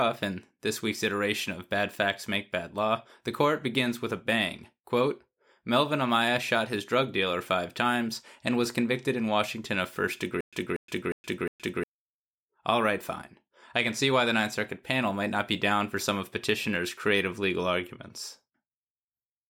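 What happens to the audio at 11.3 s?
At 11.3 s the speech is caught in a stutter with silent gaps (10.41 to 11.84 s). A 238 ms fragment repeats four times, each followed by 119 ms of digital silence. A seamless loop would not go dead and a plain dropout would not repeat; this does both, the mark of a likely stalled stream retrying.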